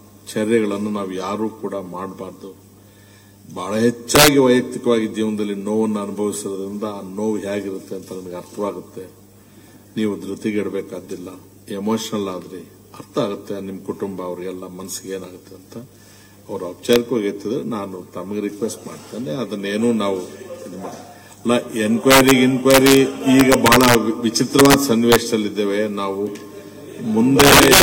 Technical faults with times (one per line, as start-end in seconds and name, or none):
4.15-4.28 integer overflow
16.93-16.96 integer overflow
22.11-22.31 integer overflow
22.71-22.97 integer overflow
23.40-23.95 integer overflow
24.59-24.74 integer overflow
25.12-25.16 integer overflow
27.40-27.82 integer overflow